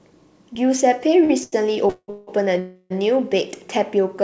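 Short stalls from a late packet occur at 1.24 to 1.31 s and 1.43 to 1.54 s. Each time, the jitter buffer ran empty and the receiver stretched the last sound for about 52 ms and then 88 ms, so a syllable is held too long with a slight buzz or dip. Then the speech resumes with nothing lost.

Call audio freezes follow at 1.90 to 2.10 s, 2.10 to 2.29 s and 2.59 to 2.92 s. The speech is replaced by a fading buzz or hiss, likely because packets were delayed in transit. The first freeze ends in about 50 ms of silence. The longest lasts 0.33 s, and each one inserts a gap before the speech picks up where it stopped. Throughout, nothing is heard above 8 kHz, which fits a G.722 call path at 64 kbps.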